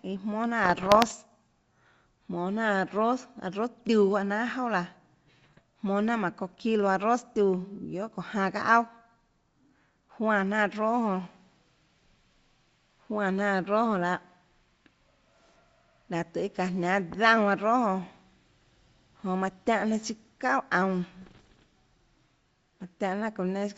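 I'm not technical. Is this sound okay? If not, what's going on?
No. There are three short patches of bit errors on an ADPCM link, at 0.64 to 1.15 s, 5.42 to 5.61 s and 21.22 to 21.64 s. Scrambled bits knock the decoder off track for a moment, so you get pops, rough crackly bursts and quick jumps in loudness.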